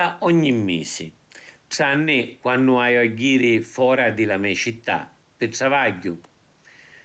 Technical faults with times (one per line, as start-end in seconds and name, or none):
none